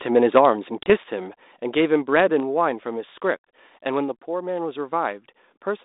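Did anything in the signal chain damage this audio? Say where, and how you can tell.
Yes. At the network stage, a few packets went missing at 0.83 s, cutting a hard-edged 30 ms hole. The G.726 ADPCM decoder's predictor and step size lost step with the sender, so the speech returns slightly distorted, settling by 0.90 s.

At 2.40 s the speech and background drop together by about 3 dB in one abrupt step. The likely cause is call processing: automatic gain control lowering the microphone's input volume in a single move, rather than fading it gradually.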